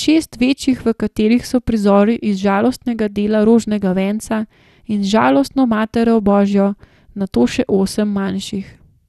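From start to finish the speech carries plainly audible MP2 compression damage. It sounds dull, with a gurgling, granular roughness. This is likely MPEG Layer II coding at a low rate, which fits about 80 kbps. The encoder gives the upper sub-bands too few bits, so they switch off and the remaining bands are coarsely quantised. On a spectrogram nothing appears above 12.2 kHz, and the highest surviving bands flicker in blocky patches.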